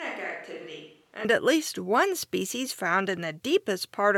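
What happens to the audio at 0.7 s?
At 0.7 s the sound is in the middle of a switch to a distant microphone, which is already under way when the clip begins and lasts until about 1.25 s, just before "at least one species". The speech is roomy and hollow, thin in the bass, about 10 dB quieter, with room noise only around 30 dB below it. This is likely because the close microphone's signal dropped out and a farther one, such as a camera's, carried the audio. Added reverberation would not change the level or the noise floor, and a plain low-pass filter would not add room sound. The abrupt return to close, full sound at 1.25 s marks it as a change of microphone.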